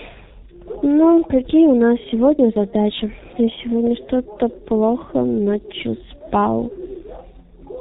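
Throughout, the speech is muffled and hoarse with smeared consonants, consistent with the G.723.1 codec at around 6 kbit/s: nothing above 4 kHz, coarse 30 ms frames.

At 3.87–3.89 s a single loud pop sits a few dB above the speech, likely a brief voltage transient such as a switch or static discharge.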